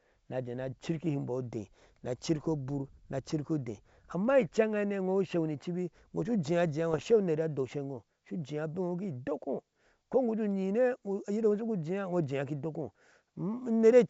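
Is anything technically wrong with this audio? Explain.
Yes, there are bit errors on an ADPCM link, heard at 2.36 to 2.45 s and again at 6.91 to 7.03 s. A few tenths of a percent of bits get flipped, knocking the decoder's step size and predictor off, so each hit rings on briefly as pops, rough bursts and quick level jumps, with the second burst worse.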